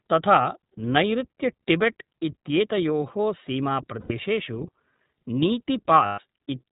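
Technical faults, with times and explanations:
throughout, iLBC codec: the speech is plainly rough and slightly synthetic, with nothing above 4 kHz. This narrowband codec codes each short frame's excitation independently, and the damage heard fits its 15.2 kbps mode with 20 ms frames.
4.00–4.12 s and 6.06–6.20 s, lost iLBC frames: each gap turns into a held, faintly buzzy vowel-like sound lasting about 100 ms and 120 ms. The decoder fills missing packets by repeating the last pitch cycle mixed with noise. Independent frames let the speech recover at once.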